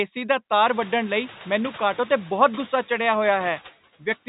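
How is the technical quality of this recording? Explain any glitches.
The recording has one continuous glitch. Noise suppressor artifacts run through the whole clip: background noise swells under the speech and dips in the gaps. The suppressor cuts about 9 dB from bands it judges to be steady noise, frame by frame. The room noise jumps by about 23 dB at around half a second and then sits about 19 dB below the speech. The audio carries the narrow, telephone-band sound of G.711 coding.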